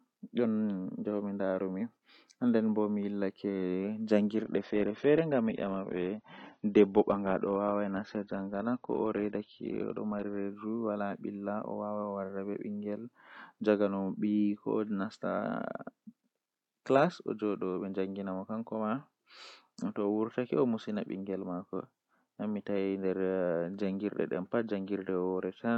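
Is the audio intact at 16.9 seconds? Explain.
Yes, at 16.9 seconds the speech plays through intact, with no fault at that moment.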